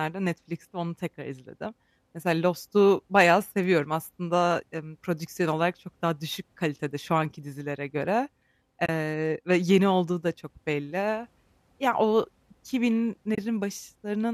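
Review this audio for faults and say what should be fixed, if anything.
AAC frame loss with muting at 8.86–8.89 s, between "şu anki dizilere göre" and "ve yeni olduğu da", and at 13.35–13.38 s: each is a 30 ms gap where lost frames were zeroed and faded by window overlap. Adding forward error correction, or concealment that extrapolates the spectrum instead of muting, would fill these gaps.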